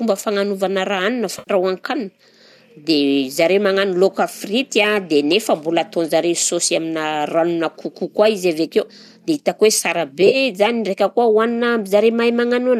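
At 1.39 to 1.51 s, AAC frame loss with concealment leaves about 80 ms of smeared, noisy speech as the decoder rebuilds the missing audio from the last good spectrum. On a spectrogram the harmonics blur into a flat, grainy band. At 10.22 to 10.36 s, 60 ms of gaps are scattered across 120 ms, with the longest run around 30 ms, which sounds like a phasey flutter. The lost frames likely came from a low-delay AAC stream.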